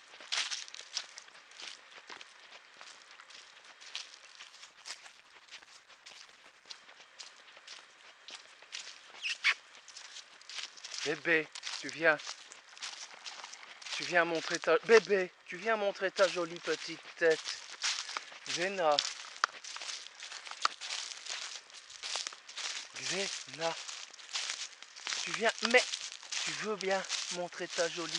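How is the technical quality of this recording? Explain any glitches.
The recording has one glitch, a call bitrate drop. From 4.49 to 6.73 s the encoder was starved of bits for about 2.2 s. The sound turns coarse, watery and muffled, which fits a fall from about 128 kbps to 14 kbps.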